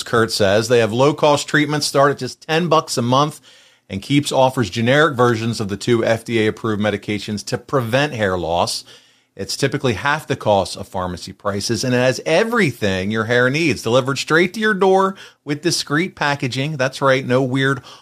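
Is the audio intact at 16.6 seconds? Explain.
Yes, at 16.6 seconds the speech plays through intact, with no dropout, click, distortion or other fault to be heard at that moment.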